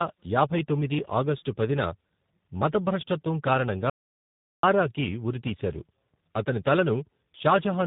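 From the start, the speech has passed through tandem speech coding: it was decoded and re-encoded at each network boundary, with the final leg fitting a low-rate coder like G.729A at 8 kbit/s after earlier G.726 and G.711 mu-law links. Each coder worked on audio the previous one had already degraded, so the errors compounded. The result is rough, muffled and warbly, with nothing above about 3.8 kHz.

From 3.90 s to 4.63 s, an audio dropout to silence removes about 0.73 s. The input stream was likely interrupted, perhaps by a failed link or momentary disconnection, while the recorder kept writing silence. The speech cuts off abruptly and resumes mid-flow, and the gap is silent, with no room tone, and whatever was said then is lost.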